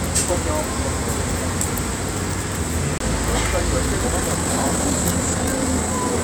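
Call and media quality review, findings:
CD skip, 2.98 to 3.00 s. Tick, then a very brief mute of a few tens of milliseconds, then playback resumes from a different point. Component: disc transport. A knock or a disc flaw made the laser jump off its place on the spiral and land on another turn.

Time-stretched section, 3.82 s to end. Pace abruptly rises to 1.37 times normal with pitch unchanged. Rushed texture. Likely cause: time-stretch processing that squeezed this part to fit a length by dropping short slices.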